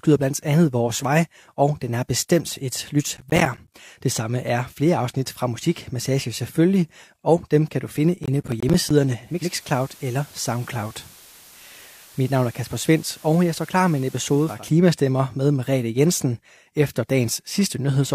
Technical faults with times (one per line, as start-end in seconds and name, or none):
3.17-3.74 processor overload crackle
8.24-8.90 processor overload crackle
9.19-14.71 digital radio blending to analogue